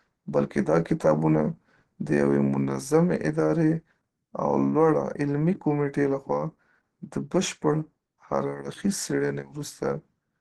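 Throughout the speech, nothing reaches above 12.2 kHz, and the voice sounds hoarse, grainy and muffled rather than swirly or hollow as MP3 would. This plainly audible damage is likely Opus compression in its hybrid speech mode, which fits a low bitrate around 16 kbps.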